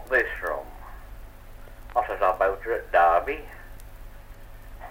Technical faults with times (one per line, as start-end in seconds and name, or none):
0.38 bit error spike
1.65-1.68 damaged data in a compressed stream
2.10 bit error spike
3.74-3.77 damaged data in a compressed stream